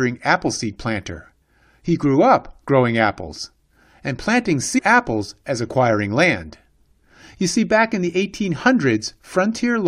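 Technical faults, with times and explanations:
4.77–4.79 s, stream segment skipped: the speech jumps abruptly forward with a brief blip at the join, and the sound on either side does not run on naturally, as though a stretch of the recording is simply gone. The likely cause is one segment of a segmented stream failing to load, with the player moving straight on to the next segment, so the audio that segment carried never plays.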